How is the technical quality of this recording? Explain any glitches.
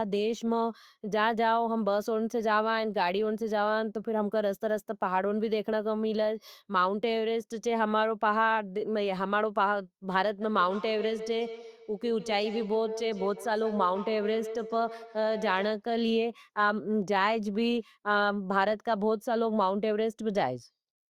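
One fault stands out: a feedback echo between two devices from 10.42 to 15.87 s. Two devices in the same room are on the call, so one plays back what the other's microphone sent and that microphone captures it again. Each device's echo canceller removes only its own playback, so the loop survives. Each word returns roughly every 150 ms, thinner and more ringing with each pass, peaking at about 11 dB below the speech.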